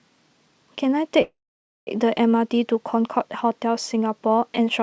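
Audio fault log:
1.22–1.89 s, call audio freeze: the speech halts, the last sound trails off as a brief fading buzz into 0.54 s of silence, then resumes exactly where it stopped. Packets were likely held up, draining the jitter buffer, so 0.65 s was inserted and nothing lost.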